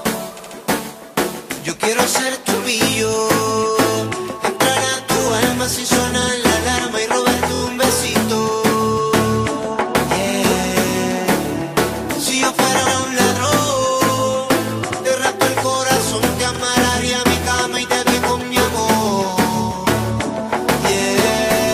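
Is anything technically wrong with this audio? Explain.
Yes. Repeated frames: a run of compressed frames was sent twice or more, so the decoder replays the same slice and the audio gets longer. At 0.38, 7.54, 12.85 and 16.55 s, blocks of about 70, 23, 116 and 46 ms repeat, each heard as a brief stutter.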